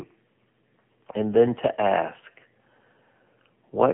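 Throughout, the voice sounds thin, boxy and buzzy, with nothing above about 3.7 kHz: AMR narrowband mobile codec damage, fitting a low 7.4 kbps mode.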